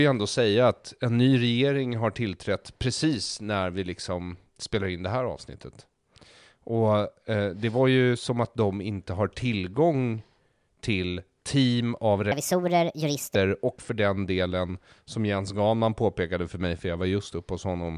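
From 12.32 to 13.35 s, wrong sample rate: the speech jumps about 6.5 semitones higher and 1.45 times faster, pitch and speed rising together, unlike pitch shifting.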